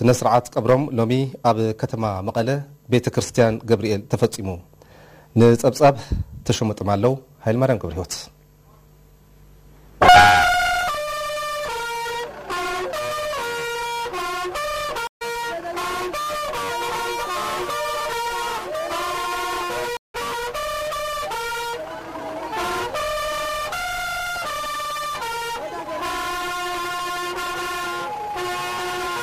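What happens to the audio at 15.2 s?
A stream reconnect runs from 15.07 to 15.23 s. The connection dropped, leaving about 137 ms of silence, and the restarted decoder picked up the stream roughly a tenth of a second later. On a waveform it shows as a flat gap; on a spectrogram, a blank vertical band with a discontinuity on resumption.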